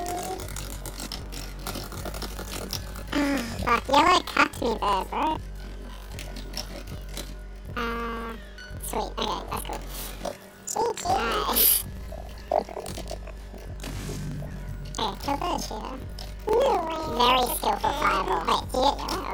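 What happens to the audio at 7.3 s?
At 7.3 s the sound is affected by planar audio read as interleaved, which runs through the whole clip. Each block of about 43 ms holds all its left samples and then all its right ones. The reader takes them as alternating pairs. So each block plays twice at double speed, left copy then right copy. The pitch sits an octave high, and a flutter at about 23.4 Hz comes from the block rate.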